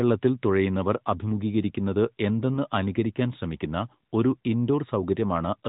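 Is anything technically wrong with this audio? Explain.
Yes. There is a lost AMR speech frame at 2.54 to 2.59 s, just after "തുഴയുന്നവർ അഭിമുഘീകരിക്കുന്നത്" and before "അനുകരിക്കാൻ ശ്രമിക്കുന്ന ഒരു". The speech is carried by the AMR narrowband mobile codec, with nothing above 4 kHz. Its light coloration fits the 12.2 kbps mode. Here one frame failed its check. The decoder filled the gap by repeating the last good pitch and vocal tract settings at reduced gain. The result is a brief dip or warble, which suggests a single lost 20 ms frame.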